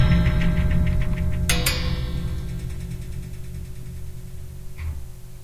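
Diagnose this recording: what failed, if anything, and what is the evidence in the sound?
Nothing failed: no stage in the chain leaves an audible trace in this recording of everyday sounds.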